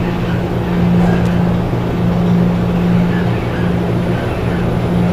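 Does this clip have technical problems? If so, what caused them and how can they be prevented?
Yes. Loose connector crackle at 1.25 s: a worn or dirty contact briefly broke and remade the connection, chopping the signal into a short scratchy burst. Cleaning contacts, replacing worn cables, and securing connectors against movement prevents this.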